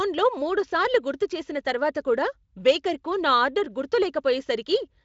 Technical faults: none

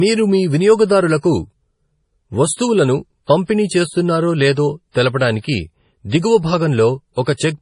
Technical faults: MP3 compression; pre-echo

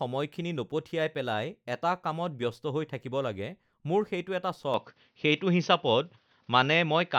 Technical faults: input switched to a poorer device

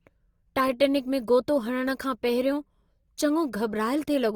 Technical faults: Opus compression

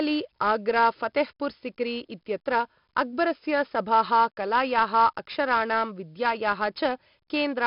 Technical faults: 4-bit ADPCM compression

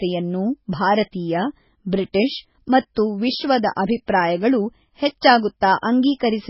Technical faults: MP3 compression

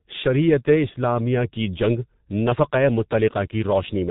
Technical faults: G.723.1 codec

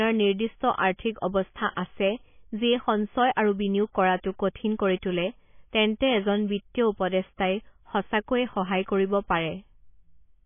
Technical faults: MP3 compression

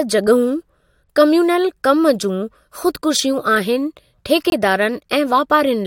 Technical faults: corrupt frame muted

